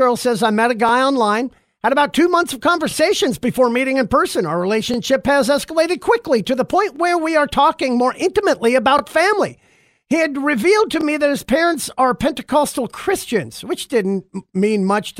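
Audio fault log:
0.89–0.91, 2.91–2.94, 4.94–4.96, 6.96–6.99, 8.99–9.01 and 11.01–11.04 s, overlapping chunks: each 2 s chunk started 25 ms before the last ended, replaying that slice of speech as a brief stutter every 2 s.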